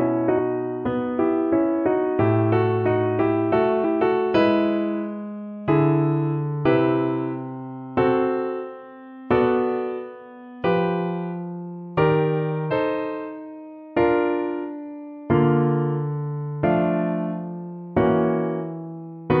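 At 3.83 s, 6.64 s and 12.70 to 12.72 s, damaged data in a compressed stream makes the decoder misread corrupt frames and lose sync. Each is a brief chirp or blip, seen as a thin broadband vertical streak on a spectrogram and a jagged discontinuity in the waveform.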